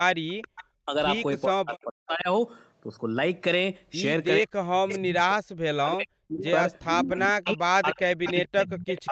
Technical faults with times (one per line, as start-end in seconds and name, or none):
0.00-2.27 speech suppressed in double talk
0.42-0.65 echo leak
4.41-6.44 speech suppressed in double talk
4.88-5.22 echo leak
6.42-7.55 echo leak
7.02-9.11 speech suppressed in double talk
8.25-9.11 echo leak